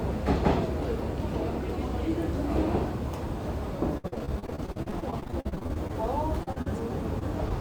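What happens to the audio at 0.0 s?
Nothing goes wrong at 0.0 s; the audio starts cleanly there, with no dropout, click or distortion at that moment.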